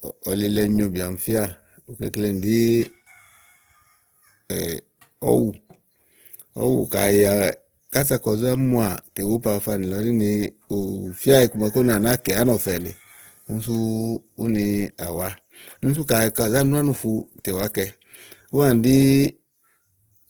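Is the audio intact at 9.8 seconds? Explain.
No. At 9.8 s, as throughout the clip, the speech is grainy and rough, likely from Opus compression at a rate that fits about 16 kbps. Starved bands are filled with folded or noise content, so it swirls less than MP3 would, and the full bandwidth remains.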